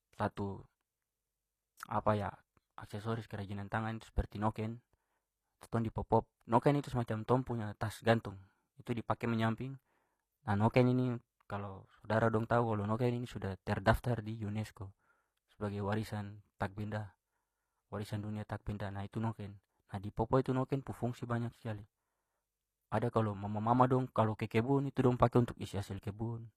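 Speech runs with HE-AAC compression damage throughout, clearly audible. The treble sounds synthetic. S sounds come out gritty and lispy, and the upper harmonics sit unevenly over the lower ones. Likely cause: treble rebuilt by band replication, which fits a low bitrate near 24 kbps.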